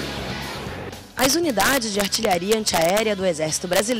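Integer overflow cracks the audio from 1.19 to 3.00 s and again from 3.73 to 3.92 s, where peaks pushed about 1 dB and about 0 dB past full scale wrap to the opposite sign instead of being limited, producing violent snaps far harsher than clipping.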